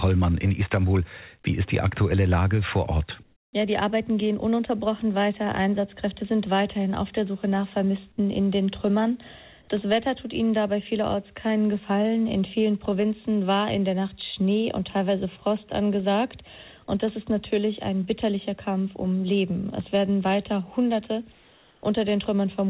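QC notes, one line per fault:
3.23–3.53 s and 21.32–21.83 s, comfort noise in place of the background: likely discontinuous transmission in pauses, so steady, featureless synthetic noise about 1–2 dB quieter replaces the real background.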